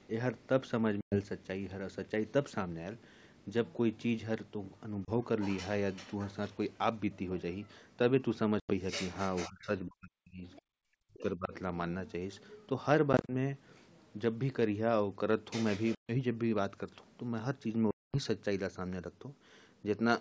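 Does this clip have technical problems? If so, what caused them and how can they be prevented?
Yes. Packet loss on an ADPCM call causes hard-edged silent holes at 1.01–1.19 s (110 ms lost), 5.05–5.10 s (30 ms), 8.60–8.73 s (90 ms), 13.13–13.31 s (90 ms scattered over 160 ms, longest gap 30 ms), 15.95–16.11 s (140 ms) and 17.91–18.15 s (230 ms). When the packets vanish, the receiving decoder's adaptive predictor and step size stop tracking the sender's, so speech resumes slightly distorted before recovering. Jitter buffering, forward error correction and packet loss concealment that also resets decoder state would prevent this.

Speech is suppressed during double talk at 9.47–10.74 s and 10.90–11.54 s. The voice dips by as much as around 40 dB for roughly a second and then under a second. The likely cause is an echo canceller that could not separate the near-end talker from the loudspeaker echo of the far end and attenuated both. 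A better double-talk detector, or a headset that removes the acoustic echo path, would prevent it.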